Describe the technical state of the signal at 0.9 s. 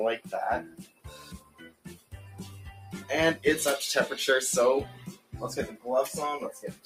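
At 0.9 s the sound is being cut by the noise suppressor. From 0.66 to 2.13 s the suppressor treats this passage as noise and pulls it down harder than its surroundings, by about 16 dB at the deepest point. Sustained and decaying parts sink the most and their tails are clipped short, so the sound at 0.9 s sinks in level, with only its sharper onsets still reaching through.

Behind that dip lies a broader fault that runs through the whole clip: a noise suppressor applied to music or sounds. The processor is tuned for speech, so it mistakes steady tones, ambience and reverberant tails for background noise and keeps attenuating them, with its gain swinging by something like 15 dB. Transients slip past while held material is pushed down, which gives the signal around 0.9 s a pumping, fluttering or thinned character.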